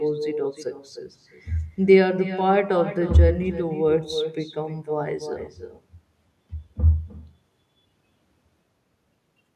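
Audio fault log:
throughout, echo with no canceller: each phrase returns roughly a third of a second later, thin, about 12 dB down, because the far-end loudspeaker's sound reaches its microphone and is never cancelled.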